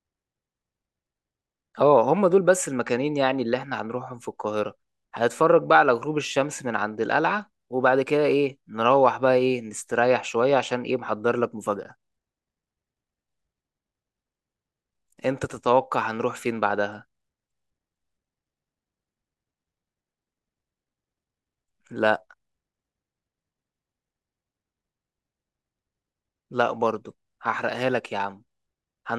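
No technical faults detected.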